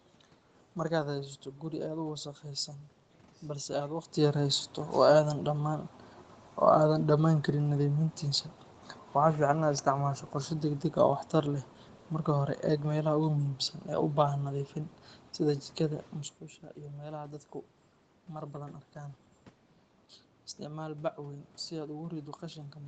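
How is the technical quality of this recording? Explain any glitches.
No glitches are audible: the level changes near 4 s and 16 s sound like the talker moving relative to the microphone, and the top end stops around 8 kHz, consistent with the call's microphone processing and codec path.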